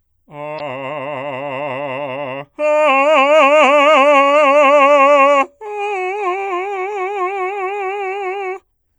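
Music, with one short burst of damaged data in a compressed stream from 0.56 to 0.60 s, about 40 ms long. Corrupted bytes there leave the decoder misreading the affected frames, losing sync and hunting for the next valid frame header. The result is a brief chirp, squawk, click or short hole. On a spectrogram it appears as a narrow vertical smear of broadband or oddly patterned energy at that point. On the waveform it shows as a small glitch or discontinuity where the signal briefly stops following its normal shape.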